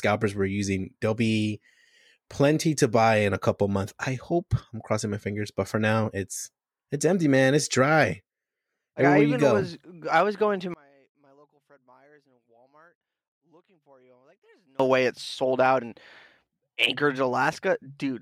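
A stereo channel has likely been inverted in polarity from 10.74 to 14.80 s, between "I was going to" and "way it's sold out". Summed to mono, the shared centre cancels, so the speech drops by about 34 dB to a faint residue.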